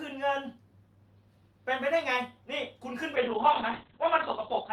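At 3.17 s the speech is hit by a call bitrate drop that lasts to the end of the clip. The encoder's rate falls from 32 kbps to 6 kbps and stays at the bottom for about 1.2 s. Coding becomes coarse and rough-edged, and the audio band shrinks from 20 kHz to 4 kHz, so the voice turns muffled and watery. Unlike packet loss, the sound never drops out or glitches.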